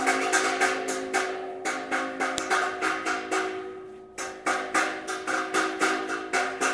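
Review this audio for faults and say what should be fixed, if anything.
A sharp click at 2.38 s is a file header played as audio: a joined WAV piece kept its header, so those bytes sounded as samples. Strip headers before concatenating or streaming.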